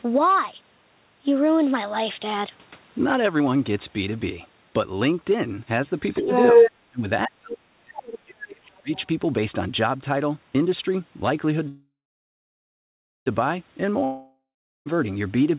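From 6.12 to 6.71 s the other side's voice leaks through, about 10 dB louder than the talker, likely because the echo canceller left loudspeaker pickup in the microphone signal. Fainter leaks of the other side follow at 7.99 to 8.18 s (about 15 dB below the speech) and 8.95 to 9.07 s (about 25 dB below).

Overlapping this, speech is suppressed in double talk: the talker dips by about 10 dB at 6.21 to 6.29 s, then by about 35 dB at 6.89 to 7.06 s and through most of 7.26 to 8.91 s. The canceller likely could not separate near speech from echo and attenuated both.

At 11.68 s a call audio freeze begins, likely from delayed packets draining the jitter buffer. The last sound is stretched into a fading buzz, then near silence for about 1.35 s, and playback resumes at 13.28 s with nothing lost but 1.58 s of added delay.

A long network dropout runs from 14.04 to 14.88 s, likely from packets that never arrived. 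A brief fading fill gives way to about 0.44 s of silence, and the audio returns with roughly 0.8 s missing. Throughout the clip, the narrowband call path leaves nothing above 4 kHz.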